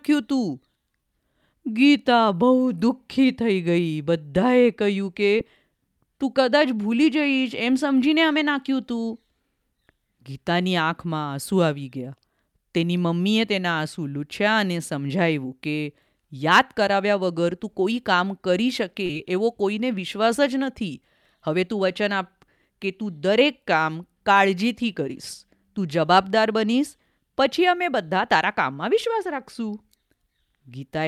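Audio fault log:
5.38 s and 19.06 to 19.10 s, short concealed packet loss: about 10 ms and then 30 ms of the stream arrived too late to decode, and the receiver covered each gap by extending the preceding sound (voiced pitch or shaped noise) before blending back into the real signal. Each is a brief smear. Unlike a true dropout, neither gap falls silent, and there's no hard click at either edge.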